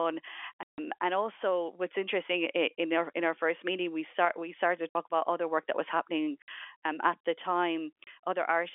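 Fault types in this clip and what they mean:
Packet loss filled with silence, at 0.63 to 0.78 s, 4.89 to 4.95 s, 6.42 to 6.48 s and 8.04 to 8.07 s: packets of the speech stream never arrived, so the receiver played silence in their place. The gaps last 150, 60, 60 and 30 ms. These are all multiples of 30 ms, which points to 30 ms packets. Each hole cuts off the band-limited telephone speech abruptly, with hard edges.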